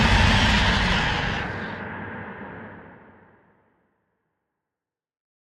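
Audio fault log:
No fault was found.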